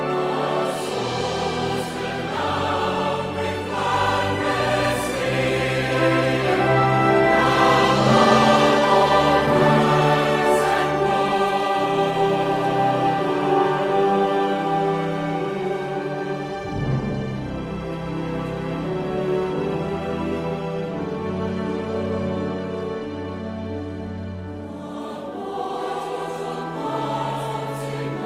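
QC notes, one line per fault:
No audible faults found; nothing to log.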